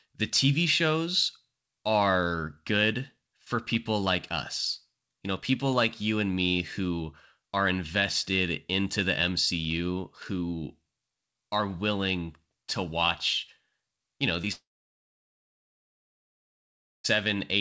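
This speech clip, carried over a call path whose G.722 coding leaves nothing above 8 kHz, suffers short concealed packet loss at 14.42 to 14.45 s and again at 14.45 to 14.48 s: two consecutive stretches of audio arrived too late for the decoder, so the receiver extended the preceding sound to cover each gap and blended back in, heard as a brief smear or wobble. Just after, from 14.52 s to 17.06 s, what is likely a long network dropout cuts the audio: the receiver briefly continues the last sound as a fading buzz or hiss, then about 2.4 s of silence follows, and the speech resumes with that stretch lost.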